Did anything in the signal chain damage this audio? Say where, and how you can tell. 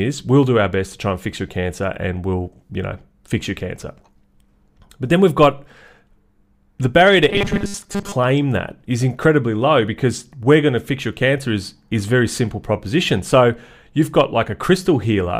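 Yes. From 7.29 to 8.16 s the speech becomes a rigid 200 Hz buzz. This is robotic sound from repeated short buffers, likely a starved driver looping 5 ms chunks in place of most of the real audio.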